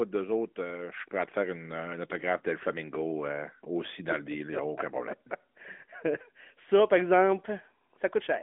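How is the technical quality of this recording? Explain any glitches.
The technical quality of the recording holds up, with no glitches to explain.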